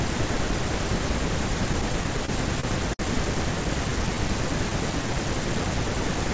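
Repeated stalls (stutter) run from 1.73 to 3.01 s in this speech recording, which passed through a call codec that leaves nothing above 8 kHz, consistent with G.722. Packets arrived late or too slowly, so the jitter buffer emptied eight times. At each gap the receiver stretched the last sound to bridge the wait, filling about 163 ms in all, roughly an eighth of that stretch, with the longest gap 58 ms. Nothing is lost, but the speech drags and hitches. A jitter buffer slow-down follows from 3.90 to 5.19 s. To rebuild its reserve, the receiver repeated single pitch periods and fragments of pauses, adding 94 ms and playing the speech at 93% speed. The pitch stays the same while sounds are drawn out, giving a slightly stretched, sluggish delivery.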